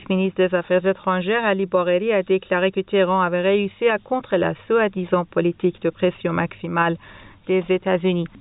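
Nothing in the recording stood out as a technical problem on listening.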